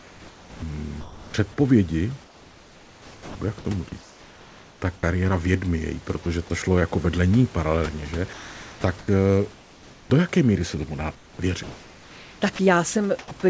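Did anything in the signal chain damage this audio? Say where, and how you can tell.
Yes. The damage is in the call processing stage, where the sender's voice detector gated the speech. Sound chopped by the voice detector appears from 0.00 to 1.34 s, from 2.24 to 5.03 s and from 12.56 to 13.31 s. In each stretch the speech breaks up repeatedly. Quieter parts are swapped for synthetic hiss, about 0.95 s, 1.98 s and 0.15 s of it. The detector likely kept switching between sending and muting, so the background flickers between real room noise and fill.

Sound dropped by the voice detector occurs from 6.23 to 6.26 s. For about 30 ms the speech gives way to steady noise, and roughly 20 ms of real sound is gone. The likely cause is the detector judging a soft stretch as background and halting transmission until it retriggered.

Comfort noise in place of the background runs from 8.33 to 10.10 s and from 11.15 to 11.39 s. 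The room noise, which sits about 26 dB below the speech, turns smooth and featureless there. In the second gap it drops by about 5 dB, sitting about 27 dB below the loud parts. This is likely discontinuous transmission. The sender stopped sending, and the receiver filled the gaps with shaped synthetic noise.

An onset clipped by the voice detector occurs at 10.08 to 10.10 s, right as the first comfort noise gap ends. About 20 ms of the start is missing, so the speech snaps in hard with no soft attack. The detector was likely slow to register that speech had resumed. The first frames were never sent, and fill covered them. Across the clip the audio stops at 8 kHz, consistent with the G.722 call codec.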